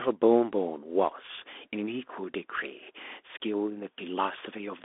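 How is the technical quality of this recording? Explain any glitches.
Technical quality is limited by one fault across the whole speech clip. Bluetooth CVSD headset codec, throughout: a one-bit, 64 kbps slope coder passes only about 250 Hz to 3.5 kHz, so the speech sounds thin, with scratchy sibilants and granular hiss. Room noise sits about 50 dB below the speech.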